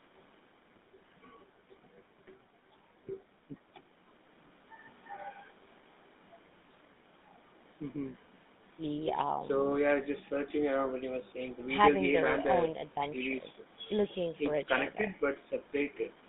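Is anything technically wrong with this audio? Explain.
Yes. Throughout the speech there is GSM full-rate codec damage. The coder models the vocal tract and drives it with a sparse pulse excitation, leaving a plainly audible buzzy, gravelly roughness, with the band held to roughly 200 Hz to 3.7 kHz. That roughness, which fits a 13 kbps full-rate coder, distinguishes it from plain telephone band-limiting.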